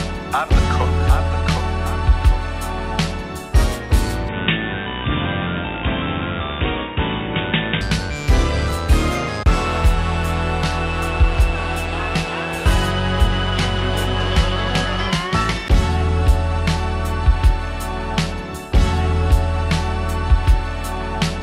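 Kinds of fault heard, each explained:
Input switched to a poorer device: likely a change of capture device partway through. From 4.29 to 7.81 s nothing is heard above 3.8 kHz, and the level drops by about 5 dB, with no gap at the switch. On a spectrogram the energy is cut off flat there, and the waveform shrinks.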